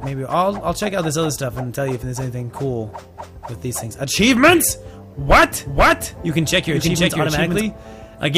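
From 5.31 to 7.61 s a doubled audio track, likely from a slower second path, adds an equally loud copy half a second late, abrupt and decay-free, unlike echo.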